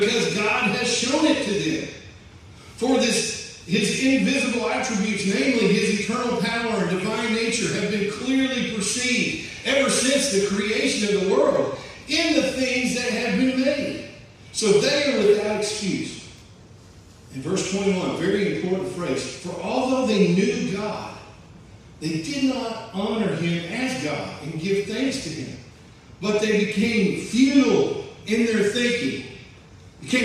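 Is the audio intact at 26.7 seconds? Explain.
Yes, at 26.7 seconds the audio is intact, with no dropout, click, distortion or other fault to be heard at that point.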